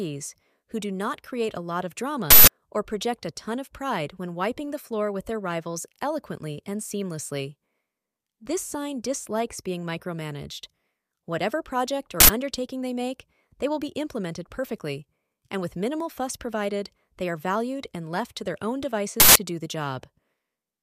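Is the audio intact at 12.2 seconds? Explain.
No. From 12.20 to 12.29 s an uninitialised buffer was played before any audio had been written into it, so stale memory went out as samples. The result is an abrupt, very loud burst of digital noise lasting about 85 ms, which fits a 4096-sample block, just before "undertaking they make they".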